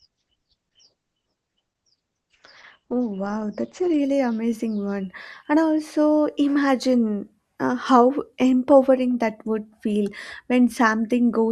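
The player began on a low-bitrate rendition of an adaptive stream, which fits Opus at about 12 kbit/s, and switched up, likely to around 64 kbit/s, at 4.0 s. Until then the speech sounds dull, lacks real treble, and carries heavier codec artefacts, before cleaning up abruptly and without a gap just before "amazing one".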